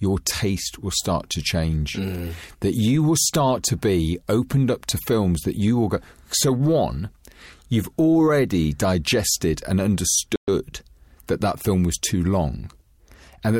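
At about 10.36 s, right after "you've already digested and", the speech drops out to dead silence for roughly 120 ms, ending around 10.48 s. That's a Bluetooth stall, likely caused by radio interference holding up packets until the headphones' buffer emptied, so playback simply paused while it waited for the resent data. You hear it as a short, clean hole in the speech rather than a click or a burst of noise.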